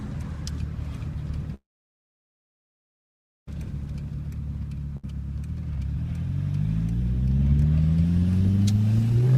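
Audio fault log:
1.54–3.48 s, call audio freeze: the sound stops and a short fading continuation gives way to silence for about 1.85 s, 1.93 s in all, after which the audio resumes where it left off. This points to delayed packets emptying the jitter buffer, likely, so nothing is lost but a gap is inserted.
4.97–5.04 s, skip ahead: playback jumps forward across a brief 64 ms join, and roughly 0.4 s of audio is gone. The two sides meet almost directly because the dropped stretch was discarded while later audio was already queued, cutting the delay by about that much.
9.10–9.38 s, jitter buffer speed-up: the final stretch runs at 150% speed with unchanged pitch, sounding hurried. The receiver is trimming an overfilled buffer by cutting many short pitch-period pieces in succession, removing roughly 150 ms of audio over this span.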